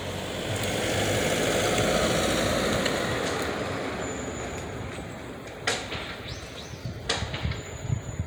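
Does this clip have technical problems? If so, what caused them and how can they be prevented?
No, this clip has no technical problems, so there is nothing to trace to a cause or prevent.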